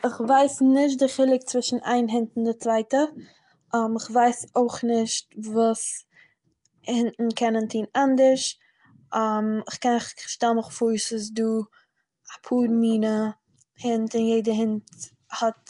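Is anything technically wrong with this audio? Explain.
Yes. Throughout the speech there is a rough hissy halo and a smeared underwater quality, with nothing above 10.6 kHz. This is likely Nellymoser compression, which codes at a fixed two bits per sample and fills bit-starved bands with noise. That noise fill is what sets it apart from the metallic swirl of MP3.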